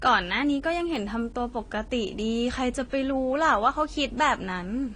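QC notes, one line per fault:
Throughout: transcoding between lossy codecs, with nothing above 10.2 kHz and two layers of coding artefacts heard together. The artefacts likely come from an earlier Vorbis encode near 48 kbit/s re-encoded as AAC-LC near 32 kbit/s, which fits the low cut-off.
0.51–1.11 s: CD scratch ticks, five short ticks, the longest around 1.5 ms, spaced regularly at about seven per second. The sound points to a damaged disc region that error correction could not rebuild, leaving interpolated or muted samples once per revolution.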